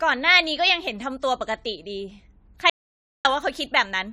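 From the start, the speech carries generation loss: a swirly, hollow smear with softened consonant attacks and nothing above 16.4 kHz. It sounds worse than a single pass at a bitrate around 64 kbit/s would leave it, which points to AAC-LC likely decoded and re-encoded a few times, each pass requantising on a shifted frame grid. What separates it from one low-bitrate encode is the stacked, watery smearing rather than just a band limit.

Between 2.70 and 3.25 s the audio drops out to silence for about 551 ms, then resumes mid-flow. The gap is silent with no room tone, so the input was likely lost, through a disconnected device, a failed link or a mute, while the recorder kept writing silence. Unlike a natural pause or a noise gate closing, the cut is abrupt at both edges, with no fade or breath.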